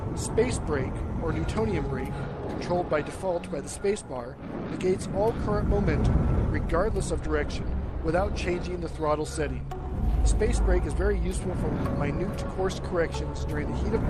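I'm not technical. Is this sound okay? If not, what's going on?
Yes, nothing wrong can be heard anywhere in this recording.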